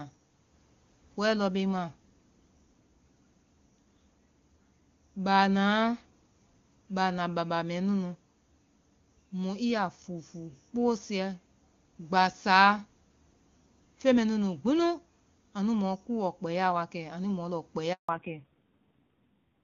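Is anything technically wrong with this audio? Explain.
Yes. There are two related faults near the end of this speech clip.

The first is a handover gap from 17.93 to 18.09 s. The speech cuts out for about 160 ms. The call was passed from one network link to another, and no speech frames arrived during the switch. The voice fades within a few tens of milliseconds, then there is silence until the new link takes over. Whatever was said in that window is gone.

The second is a fallback to narrowband, starting at 18.09 s and lasting to the end. Before this point the call runs on the AMR wideband (HD Voice) codec, which sounds like a high-rate mode with full, crisp speech. After the handover the call drops to an older narrowband codec, which fits a low-rate AMR-NB mode near 5.9 kbit/s. Nothing above 4 kHz survives. The voice turns dull, muffled and somewhat rough.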